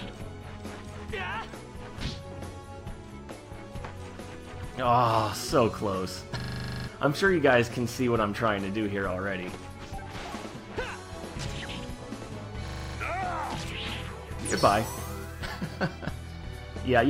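At 6.4 s the audio seizes into a system hang loop, with one 40 ms fragment repeating exactly twelve times until 6.88 s. The host or driver stalled while the output hardware kept replaying the same ring buffer. At 25 Hz, the repeats fuse into a coarse, rattling buzz. About half a second of program is lost. The same fault returns from 12.68 to 12.96 s, seven repeats of a 40 ms fragment, dropping around 0.3 s.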